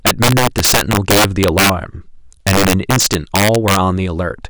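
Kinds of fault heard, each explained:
Integer overflow: the speech is pushed about 12 dB too hot somewhere in the integer path, and instead of being limited, every sample that runs past the top of the range wraps around to the opposite extreme. Only a small slice of the signal, around 3 percent of samples, actually goes over, but each of those flips straight across full scale, so the loudest moments throughout the speech break into hard, violent cracks, far harsher than ordinary clipping.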